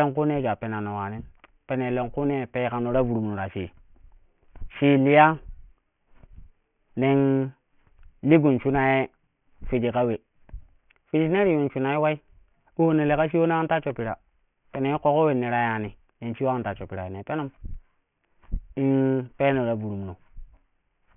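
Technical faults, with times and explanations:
Throughout, aliasing: content above 3 kHz folds back below it, roughly 20 dB down, so sibilants sound gritty and metallic. This fits resampling to 6 kHz unfiltered.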